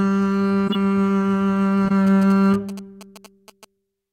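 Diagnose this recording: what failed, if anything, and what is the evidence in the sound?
At the codec stage, two runs of corrupt frames were decoded and played: short chirpy bursts at 0.67–0.76 s and 1.85–1.92 s, each spanning what sounds like about three frames. Flipped bits misplaced the spectral energy. A spectrogram shows blocky, off-pitch smears; the waveform shows spikes near -10 and -15 dBFS.

In the analogue wiring, GSM signalling bursts from a nearby 2G phone were rectified into the audio from 2.07 to 3.65 s. A galloping dit-dit-dit of short buzzes sits roughly 20 dB below the music. The 217 Hz repetition shows as a harmonic comb on a spectrogram and as clustered vertical ticks on the waveform.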